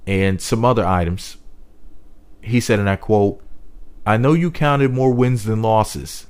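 Sample clock jitter runs throughout: the converter's clock wobbles by around a microsecond or two, adding a faint hiss, roughly 45 dB down, that swells on loud, bright passages.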